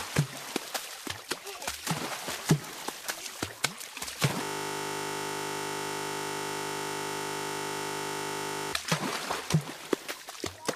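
From 4.43 s to 8.73 s the audio is caught in a system hang loop. The computer or its driver stopped supplying new audio, but the sound hardware kept replaying the last piece of its ring buffer. That piece is 20 ms long. It repeats exactly, about 215 times over. Because the loop is so short, it fuses into a steady buzz at 50 Hz. The buzz stops abruptly at 8.73 s.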